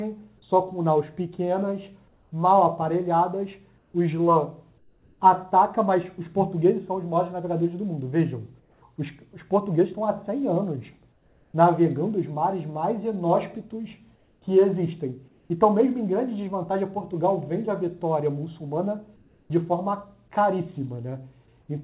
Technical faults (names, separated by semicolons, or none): comfort noise in place of the background